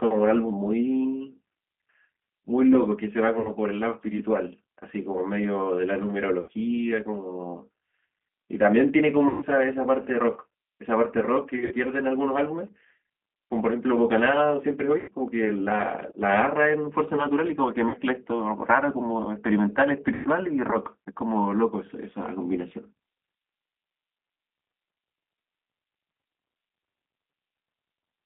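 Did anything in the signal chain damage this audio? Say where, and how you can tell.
Yes. The G.729 codec, at the codec stage, affects the whole clip. The speech is confined to about 200 Hz to 3.5 kHz and has a plainly rough, synthetic texture. That fits an 8 kbit/s coder rebuilding speech from a vocal-tract filter, a pitch predictor and sparse pulses.

VoIP packet loss concealed by the speech codec, at the network stage, occurs at 3.40, 6.41, 9.28, 11.55, 15.00, 17.89 and 20.14 s. The gaps last 50 to 130 ms, and the one at 11.55 s is scattered over 160 ms. At each gap the decoder stretches its last pitch and filter into a fading buzzy tone or coloured noise, and the speech sounds weak briefly afterwards.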